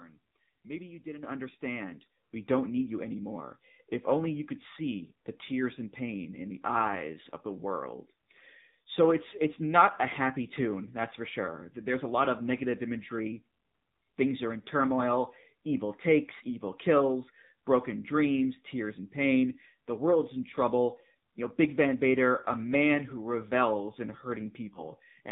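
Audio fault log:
Throughout: AMR narrowband mobile codec. Nothing above 4 kHz survives, and the speech has a buzzy, synthetic edge that fits the low 7.4 kbps AMR-NB mode. Each frame rebuilds the voice from a vocal tract model driven by only a few pulses, and that sparse excitation produces the buzz.
1.23 s and 2.25 s: microphone volume stepped up. Right after "you didn't" the level jumps by about 8 dB, and right after "you didn't understand" by about 5 dB. Voice and background rise together, as when the call software raises the input gain in one step.
24.74–24.85 s: lost AMR speech frames. A brief dip or warble, consistent with a single lost 20 ms frame. The decoder reuses the last good pitch and vocal tract settings at falling gain, so the sound smears momentarily and comes back weak or rough.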